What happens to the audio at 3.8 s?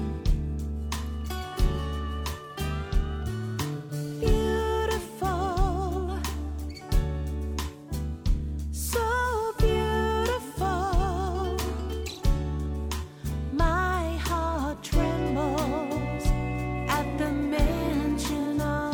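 At 3.76 s the audio hits AAC frame loss with concealment, lasting until 3.92 s. That gap of about 128 ms fits three lost AAC frames. The decoder had nothing new to play, so it rebuilt the gap from the last good spectrum. It reused that spectral shape with scrambled signs or interpolated energy. The loss is short, so it never decays into silence. It comes through as a brief smeared, noisy, phasey patch.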